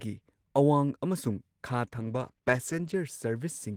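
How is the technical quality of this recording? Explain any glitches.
The recording carries one glitch: a call bitrate drop from 1.86 to 3.05 s. There the speech turns rough and muffled, with the top end thinned, as the encoder was pushed to spend far fewer bits. It sounds like a fall from about 32 kbps to about 13 kbps, held for roughly a second before recovering. Unlike packet loss, nothing drops out or repeats; the sound stays continuous but coarser.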